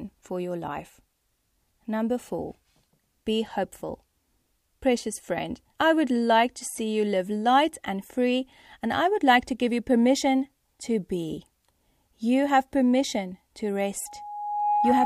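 Right after "have permission to", at about 14.06 s, a loudspeaker feedback squeal kicks in and runs to the end of the recording at 15.05 s. The mic is hearing its own speaker, and at 832 Hz the loop gain tops unity, so that tone feeds itself. You hear a single pitch swell up over roughly three quarters of a second until it sits about 5 dB louder than the speech.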